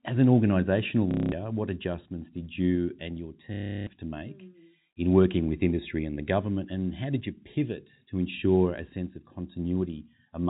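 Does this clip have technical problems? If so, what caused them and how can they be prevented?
Yes. Packet loss with last packet repeated occurs at 1.11 to 1.32 s, after "as an organisational" and before "what adjustments did you", and again at 3.54 to 3.87 s, after "did you and your" and before "to make". During these gaps of 210 ms and 330 ms, the receiver replayed its last good packet until fresh audio arrived. Each loop restarts out of step with the pitch, and the repeats merge into a robotic buzz near 33 Hz, which fits 30 ms packets. The narrow telephone band of the G.711 coding is audible throughout. To prevent this, use a steadier network path or a larger jitter buffer, and enable proper packet loss concealment or forward error correction instead of plain packet repetition.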